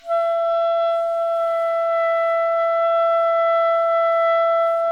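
No technical faults can be heard anywhere in the sound.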